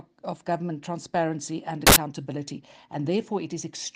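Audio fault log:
1.87–1.96 s, samples built from the wrong bytes. For about 0.1 s the audio turns into a loud burst of noise. The reader joins each sample's bytes wrongly here. It may be off by one byte, or it may swap their order. The fast-changing low bits then land in the high part of each value. Every sample becomes a large, near-random number. That is why the sound gives way to loud, harsh broadband noise.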